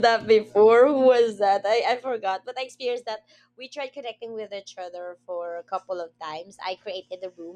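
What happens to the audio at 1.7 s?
Nothing goes wrong at 1.7 s: the speech runs through that moment intact, with no dropout, click or other fault to be heard.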